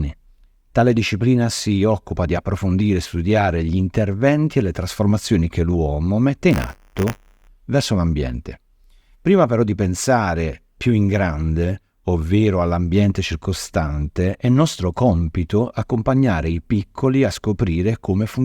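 From 6.5 to 7.48 s there's buffer tearing. The ring buffer's writer and hardware reader have slipped and cross every period, so a small sliver of each buffer holds audio from around 20 ms earlier. Those hard splices repeat at 100 Hz, a robotic buzz over the sound.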